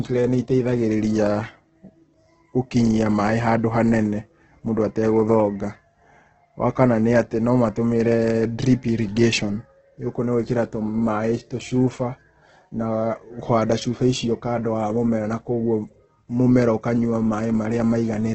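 From start to finish the speech carries heavy damage that is likely Opus compression in its music mode, starved of bits at a rate the sound suggests is near 12 kbps. Nothing survives above 8.3 kHz, so the top is dull, and the encoder fills thin bands with folded or noise-like energy, making the voice rough and grainy. That graininess, without the watery swirl and gaps of MP3 at low rates, is what sets it apart.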